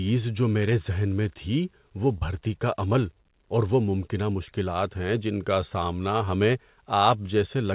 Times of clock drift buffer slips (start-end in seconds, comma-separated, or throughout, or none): none